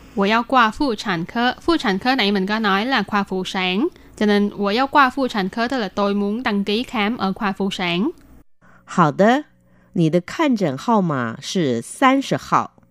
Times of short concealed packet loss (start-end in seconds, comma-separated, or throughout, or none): none